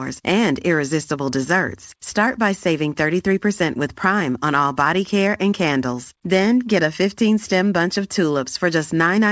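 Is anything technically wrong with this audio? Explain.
No, nothing is technically wrong.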